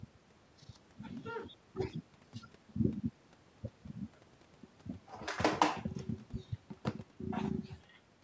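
Nothing here goes wrong at any point; the speech simply carries the usual mark of call microphone processing, with the lowest bass trimmed away and nothing above 8 kHz, which is just how that path normally behaves.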